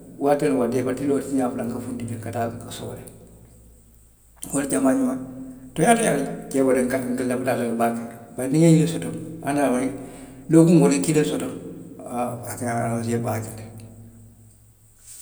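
No technical faults are audible anywhere in this speech recording.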